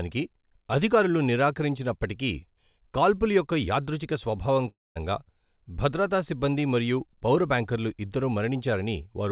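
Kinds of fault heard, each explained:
Long network dropout: Right after "కాల్పుల యొక్క యాదృచ్ఛిక స్వభావం", at 4.68 s, the sound breaks off until 4.97 s. Concealment stretches the last fragment into a buzzy tail that quickly decays into about 210 ms of near silence. The audio then resumes with roughly 280 ms of the original gone. The likely cause is a burst of lost packets on a call path whose band stops at 4 kHz, which fits G.711 mu-law at 64 kbps.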